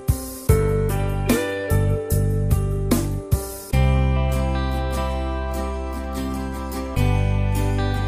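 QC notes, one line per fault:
No faults found on this pass.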